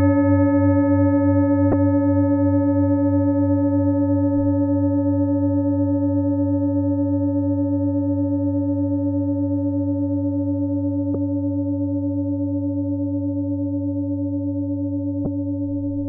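At 1.70 to 1.73 s, again at 11.14 s, and once more at 15.23 to 15.26 s, the sound is briefly disrupted, the mark of damaged data in a compressed stream. Corrupted bytes in the encoded file make the decoder misread those frames and lose sync until it finds the next valid header. Each event lasts up to about 30 ms.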